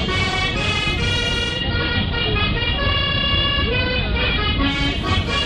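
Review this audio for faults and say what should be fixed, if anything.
Digital radio blending to analogue, 1.47 to 4.83 s: the receiver lost the digital stream and cross-faded over 172 ms to the station's AM broadcast. Hiss rises to roughly 30 dB below the signal at unchanged level before it blends back. Improve antenna placement or reception so the digital signal holds, or capture from the digital-only output.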